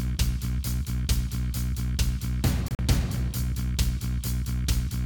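Between 2.68 and 2.79 s the audio breaks into several abrupt holes of silence, about 67 ms in total, the longest 40 ms, with sound resuming each time as if it had kept playing underneath. This is likely a Bluetooth dropout, with late packets discarded.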